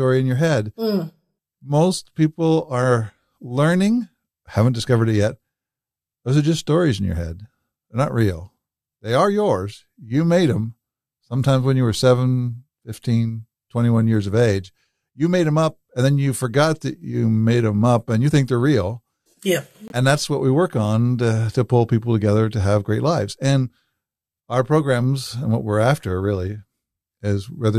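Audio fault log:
19.88–19.92 s, corrupt frame muted: the speech drops abruptly into dead silence for about 44 ms, then resumes exactly on time with nothing skipped or shifted. The sharp edges and the length of the gap fit two consecutive compressed frames that arrived with damaged bits. The decoder rejected them as undecodable, and the player filled their slots with silence rather than stretching or repeating nearby audio, so the gap is a clean hole.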